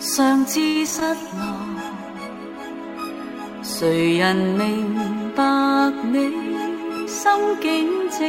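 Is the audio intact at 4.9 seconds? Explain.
Yes, the audio at 4.9 seconds is intact, with no dropout, click, distortion or other fault at that moment.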